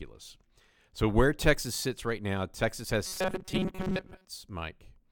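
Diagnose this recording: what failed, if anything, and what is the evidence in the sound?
From 3.06 s to 4.26 s the speech collapses into a rigid, metallic buzz pitched at 188 Hz. It still tracks the rough shape of the phrases but loses their natural inflection. This is robotic sound from repeated short buffers, a failure at the driver or buffer stage. The likely cause is audio arriving too seldom, so playback keeps looping the last chunk of about 5.3 ms. That interval fixes the buzz pitch, and most of the real signal in that stretch is skipped.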